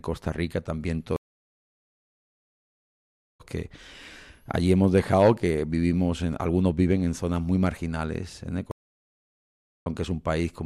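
At 1.16 s the speech cuts to about 2.2 s of silence and resumes near 3.41 s roughly a second and a half further on; at 8.71 s a 1.1 s gap ends near 9.86 s skipping ahead slightly. Each is a stream reconnect: the connection dropped, the player reconnected mid-stream and restarted decoding.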